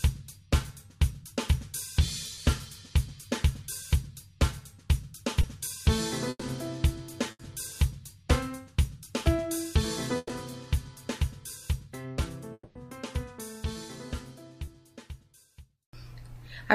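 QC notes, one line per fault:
2.35 s, 5.41 s, 14.65 s, short concealed packet loss: a brief smear or wobble where about 20 ms of sound went missing each time. The receiver bridged each hole by extending the last sound, then blended back into the real audio.
6.29 to 6.43 s, 7.31 to 7.41 s, 10.17 to 10.31 s, burst of packet loss: the sound stretches into a held buzz or fading hiss, then resumes further on. About 120, 80 and 120 ms were lost. The receiver continued and faded the last sound, reaching silence briefly in the first and third bursts.
12.53 to 12.77 s, long network dropout: a fading continuation of about 220 ms, ending in roughly 40 ms of silence, before the audio returns with that stretch gone. The likely cause is a network dropout during which no audio arrived and the receiver concealed the gap.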